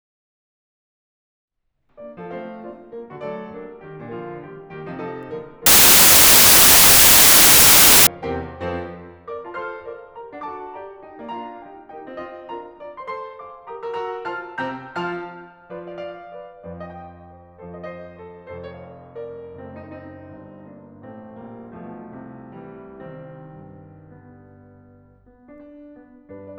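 Music, with a wrong sample width fault from 5.66 to 8.07 s. The data in that stretch appear to have been written as packed 24-bit samples but read back as 16-bit, so most values are stitched from mismatched bytes. The result is a burst of loud, harsh noise with the music buried inside it, playing at about two-thirds speed and correspondingly lower in pitch, before the correct sound returns.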